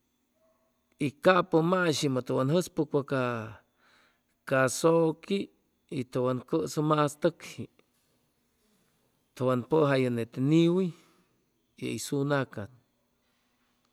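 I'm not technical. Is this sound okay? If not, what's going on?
Yes, the recording comes through without any technical faults I can hear at any point.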